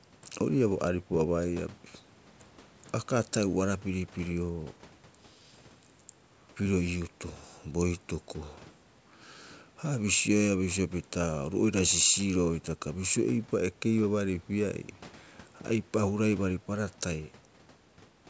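No technical faults can be heard in the speech. It has passed through a call's microphone processing, which trims away the lowest bass and leaves nothing above 8 kHz.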